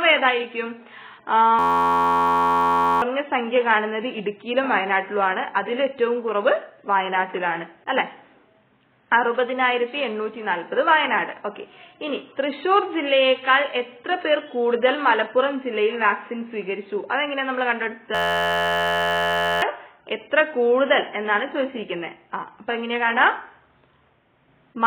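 A system hang loop runs from 1.59 to 3.02 s and again from 18.15 to 19.62 s. The system froze while the hardware kept replaying one 11.61 ms chunk, which fits a 512-sample buffer. It sounds like a steady 86.1 Hz buzz replacing about a second and a half of audio each time.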